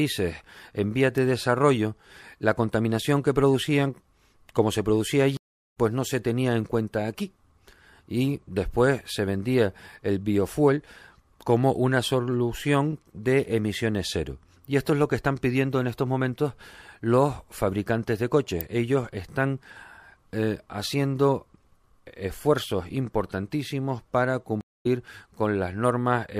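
A nearby switch or static discharge, likely arcing onto the audio line as an electrical switching spike, puts a sharp snap or a tight cluster of clicks over the speech at 1.18 s and again at 18.61 s, just after "momentos los fabricantes de".

Stream reconnects occur at 5.37–5.78 s and 24.61–24.86 s. The connection drops, playback goes silent, and a fresh decoder picks up further along the stream. After "producían como se producía" there is 326 ms of silence, and the speech resumes roughly 0.3 s later at "pues no se tenía". After "esfuerzos importantísimos para" the gap is 174 ms, with about 0.15 s skipped.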